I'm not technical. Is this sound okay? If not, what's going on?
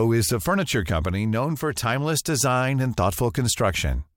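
Yes, nothing stood out as wrong when listening to this speech recording.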